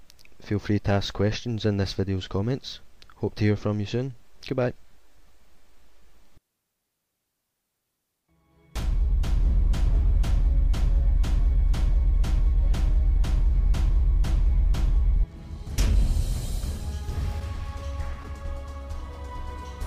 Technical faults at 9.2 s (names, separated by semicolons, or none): none